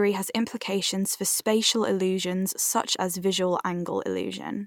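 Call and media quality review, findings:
Nothing to flag on this speech recording; no audible problems turned up anywhere in it.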